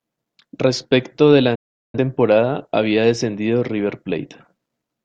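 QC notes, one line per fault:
1.55–1.98 s digital broadcast dropout: bad frames made the receiver mute through an 8 ms fade, leaving a flat waveform, a blank spectrogram column, and 384 ms of sound lost.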